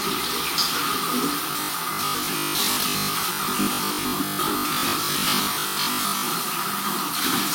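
From 1.51 s to 6.29 s the sound turns rigid and metallic, with a fixed 50 Hz buzz imposed on it while its rough shape still comes through. This is robotic sound from repeated short buffers, likely caused by audio arriving too slowly so that the last 20 ms block keeps being replayed, covering about half the stretch. Unlike steady 50 Hz mains hum, this buzz rises and falls with the sound itself and stops at 6.29 s.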